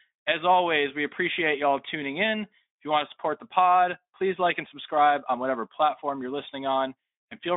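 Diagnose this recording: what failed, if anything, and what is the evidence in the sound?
Nothing failed in this recording, so there is no fault and no evidence of one in the sound.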